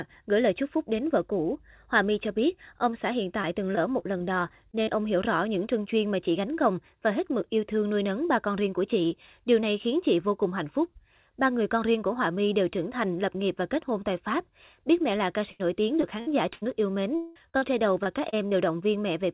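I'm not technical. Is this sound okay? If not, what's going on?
No. The speech has repeated packet loss (robotic sound) in two places. From 3.42 to 4.96 s, between "biết ông xã hiện" and "hiểu rõ những trưng", short bits drop out several times. From 15.51 to 18.53 s, after "mẹ là ca", it is worse, with one hole of about 0.2 s. Each missing bit is covered by stretching the sound just before it, which makes the voice choppy. A single dropout would be one brief break, not this rapid stutter.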